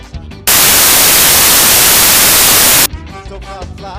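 From 0.47 s to 2.86 s the sound is buried under loud, harsh broadband noise. This is samples built from the wrong bytes: each sample's bytes are being put together in the wrong order or at the wrong offset, so the rapidly fluctuating low-order bits end up as the dominant part of every value. That turns quiet detail into loud noise for this whole 2.4-second stretch.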